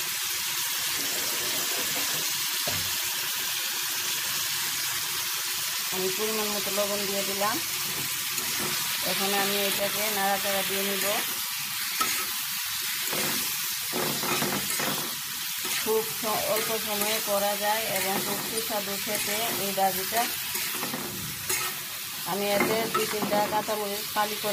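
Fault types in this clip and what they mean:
MP3 compression: Throughout, the audio has a watery, swirling quality with smeared attacks, likely from MP3 encoding at a bitrate that fits about 64 kbps. With so few bits, the encoder drops high frequencies and quiet frequency components, which flicker between frames.
Corrupt frame decoded: From 17.36 to 17.40 s there is a brief glitch of about 40 ms, peaking at around -15 dBFS. Damaged data in what sounds like a couple of compressed frames was decoded anyway, putting energy at the wrong frequencies for that short span.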